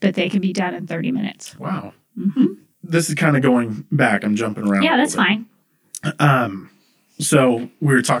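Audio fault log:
Throughout: channel delay (comb filtering). One channel lags the other by around 20 ms, and the mono sum cancels at evenly spaced frequencies from around 30 Hz upward, making the speech sound rough or slightly doubled. A spectrogram shows fixed, evenly spaced dark horizontal notch stripes.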